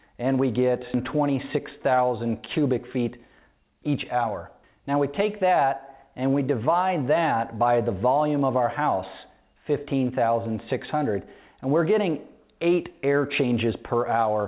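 A skip ahead comes at 0.94 s. Roughly a second of audio never reaches playback, and nothing fills the gap, so the material on either side is butted straight together and the sound lurches forward. The joined edges sit close together with little or no gap, leaving only an abrupt change in continuity. That fits the buffer throwing away a backlog of waiting audio, which cuts the delay by about a second at once.

A jitter buffer speed-up follows from 1.56 to 2.30 s, running at 106%, and again from 2.96 to 4.27 s at 105%. The buffer was holding more audio than it wanted, so it trimmed out short slices one or a few pitch periods long, again and again, removing around 50 ms in the first stretch and around 70 ms in the second. Pitch stays put, but the sound moves slightly faster and feels hurried. The whole clip passes through a call codec with nothing above 4 kHz, which fits G.711 A-law at 64 kbps.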